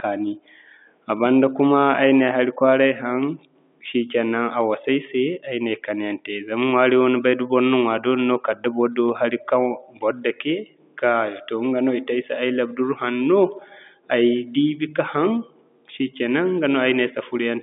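No technical faults are audible.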